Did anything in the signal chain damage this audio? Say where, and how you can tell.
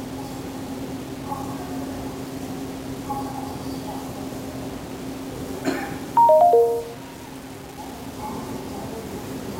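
Yes. Low bit depth without dither runs through the whole clip, with no change along its length. The likely cause is a sample-format conversion that rounded the audio to about 6 bits. The grit follows each sound and sits roughly 20 dB below it. Dithered requantization would leave a steady, signal-independent noise floor instead.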